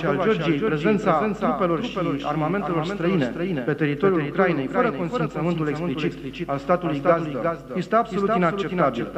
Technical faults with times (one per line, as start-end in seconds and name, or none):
0.00-9.17 doubled audio track